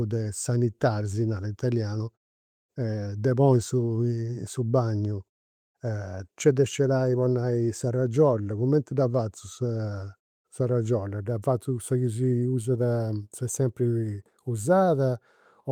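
No technical faults can be heard in this speech recording, and the signal holds steady throughout, with nothing breaking up or distorting; the background drops to silence in longer pauses, which is normal behaviour.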